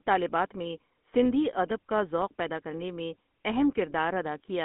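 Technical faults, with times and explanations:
Throughout: GSM full-rate codec. The speech carries a buzzy, gravelly roughness because the excitation is rebuilt from coarsely spaced pulses, and the band runs only from 200 Hz to 3.4 kHz, which fits 13 kbps GSM. Unlike narrowband PCM, the harshness sits inside the voice itself.
3.51 to 3.56 s: GSM bit errors. Just after "ذوق پیدا کرنے میں", the speech briefly breaks into a squawking, gargled burst, which points to about two corrupted frames whose filter, pitch or gain values were decoded wrongly. A packet dropout would leave silence or a smeared repeat instead.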